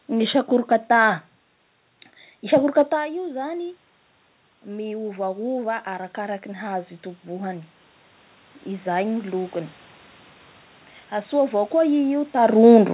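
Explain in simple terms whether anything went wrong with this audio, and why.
From about 4.63 to 7.57 seconds, the voice and the room noise behind it slowly swell louder together over roughly three seconds. This is automatic gain rising: the sound arriving at the microphone had dropped a good deal, around the time the talker moved back at about 3 seconds, so the call's level control gradually turned itself up to compensate. Because it only made up part of the drop, the voice stays quieter than before.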